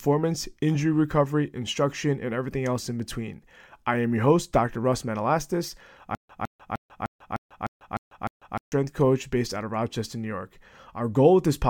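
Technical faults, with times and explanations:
6.15–8.72 s, stutter with silent gaps: a 159 ms fragment repeats eight times, with 144 ms of silence between. Likely a stalled stream retrying. Then "coach based out of".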